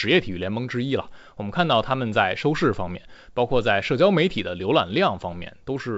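Speech over G.722 wideband coding, with no faults heard.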